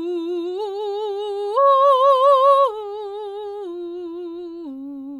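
A short piece of music, and nothing technically wrong turns up anywhere in it.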